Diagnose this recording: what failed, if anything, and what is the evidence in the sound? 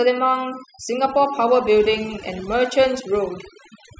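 The failure is overdone noise removal at the processing stage, present across the whole clip. Between phrases the background drops to near silence dotted with twinkling specks. A suppressor set too aggressively is gating individual frequency bands whenever their level falls near its noise estimate, taking quiet speech detail with it. A low-bitrate codec would instead dull the top end evenly and leave the background continuous rather than gated to silence.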